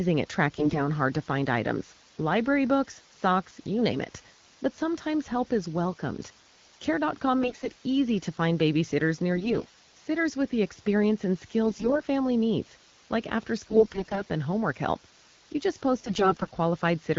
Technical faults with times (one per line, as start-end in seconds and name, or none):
0.00-17.19 low bit depth with dither
0.58-0.80 AMR bit errors
7.42-7.68 AMR bit errors
9.36-9.76 AMR bit errors
11.66-12.02 AMR bit errors
13.70-14.22 AMR bit errors
16.03-16.50 AMR bit errors